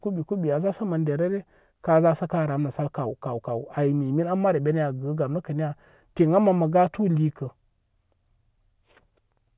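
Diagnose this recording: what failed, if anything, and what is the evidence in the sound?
No faults detected in this recording.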